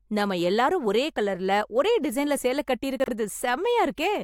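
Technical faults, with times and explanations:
3.00–3.08 s, chunks out of order: one 40 ms chunk plays a slot late, so the speech jumbles briefly, with three hard joins.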